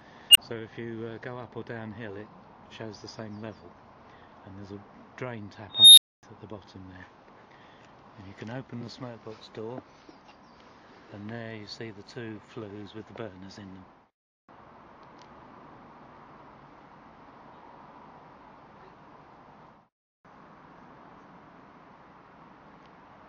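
At 0.30 s an unstable filter erupts: a tone near 3 kHz swells over about 49 ms, clips, then drops into roughly 23 ms of silence. At 5.69 s the same runaway recursion repeats around 4 kHz, building over about 285 ms before a 255 ms dropout while the filter resets.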